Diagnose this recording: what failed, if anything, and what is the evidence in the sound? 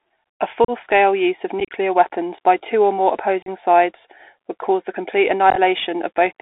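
The codec stage is at fault. The Bluetooth CVSD headset codec runs throughout. The band sits at 300 Hz to 3.6 kHz. Its one-bit steps leave scratchy s sounds and granular hiss.

The wireless link also failed. Unconcealed Bluetooth headset packet loss cuts abrupt holes at 0.65 s, at 1.60 to 1.71 s after "use of", at 3.42 s after "by two or more", and at 5.50 s after "would cause the complete". Silence or an idle pattern replaced the lost packets.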